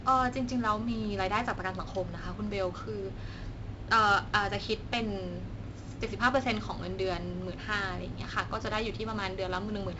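The whole clip carries 4-bit ADPCM compression: each sample is coded as a coarse step from a prediction, so a gritty hiss rides every louder stretch of speech and attacks smear. Nothing sits above 7.8 kHz, which fits a 64 kbps, 16 kHz stream.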